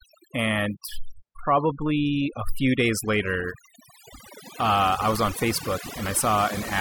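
Overdone noise removal runs throughout this speech clip: an over-aggressive noise reducer cuts bands near its noise estimate, leaving near-silent twinkling gaps.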